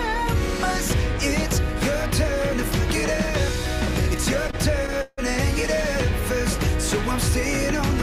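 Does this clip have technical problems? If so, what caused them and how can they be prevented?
Yes. Between 4.47 and 5.20 s there are repeated stalls (stutter): the sound hitches four times, with about 200 ms of stretched, held-over audio in total and the longest hold at 160 ms. Packets were arriving late, so the jitter buffer kept running dry, and the receiver filled each wait by extending the last bit of sound. Nothing gets lost, but that stretch drags. A larger or adaptive jitter buffer, along with steadier network delivery, would prevent it.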